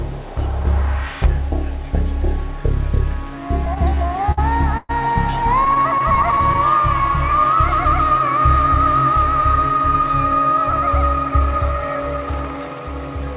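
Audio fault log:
3.66–4.39 s, repeated stalls (stutter): the sound catches eight times, the longest hold about 57 ms and roughly 131 ms in all. Packets arrived late, the jitter buffer kept emptying, and the receiver stretched the last sound until data resumed, so the passage drags and stutters.
4.77–4.91 s, call audio freeze: a 119 ms hold where the last sound is carried on and fades to a moment of silence before playback picks up where it left off, likely because delayed packets left the jitter buffer empty. The clip falls 119 ms further behind.
5.65–6.59 s, repeated stalls (stutter): ten shorter hitches, none longer than 19 ms, totalling 112 ms. Each is a brief buffer underrun covered by continuing the preceding sound, giving a choppy, hesitant flow.
6.78–7.56 s, jitter buffer slow-down: the receiver repeated single pitch periods and bits of pauses to rebuild its reserve, adding 42 ms and playing at 96% speed. 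The sound is slightly drawn out at unchanged pitch.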